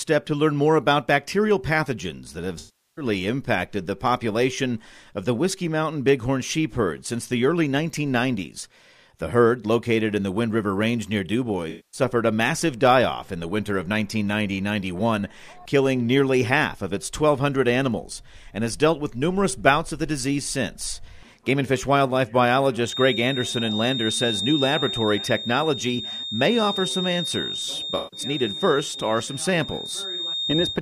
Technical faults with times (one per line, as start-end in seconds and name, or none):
2.58-3.05 AAC frame loss with concealment
11.69-12.01 AAC frame loss with concealment
22.81-30.82 feedback whistle
27.97-28.20 AAC frame loss with concealment